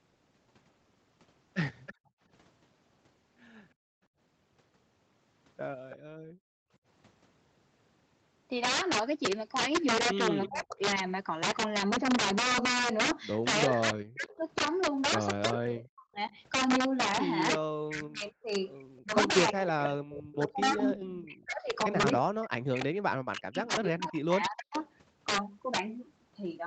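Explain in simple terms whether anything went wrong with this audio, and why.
Several things went wrong here, and one runs through the whole clip.

First, integer overflow. When the speech gets loud, the level goes past the highest number the audio format can hold. Instead of stopping at the ceiling, the value wraps around to the opposite extreme. So the loudest moments don't just get squashed like ordinary clipping. They snap into harsh, violent cracks. Only a small share of the audio is pushed that far, but it's enough to put cracks on the loudest peaks.

Next, echo leak. A copy of the speech comes back about a third of a second late, which sounds like a loudspeaker on one end feeding back into its microphone. The likely cause is an echo canceller that didn't clean all of it out. You hear short scraps at 1.86 to 1.94 s, 5.9 to 5.97 s, 10.42 to 10.65 s and 14.28 to 14.33 s. Then there's a long, fairly noticeable stretch from 17.54 to 24.88 s.

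Then there's background gated by the echo canceller, between 1.94 and 6.8 s. While the far end was playing through the loudspeaker, the canceller clamped the microphone down hard to avoid sending echo back. The room sound drops out almost completely in those moments and then comes back when it lets go. The dips add up to roughly a second across that window, so the background seems to blink on and off.

Finally, speech suppressed in double talk, from 10.49 to 24.77 s. When both sides talk at once, the canceller likely struggles to tell the local talker from the echo and turns everything down. Here the speech dips deeply, sometimes nearly vanishing, for about seven seconds in total.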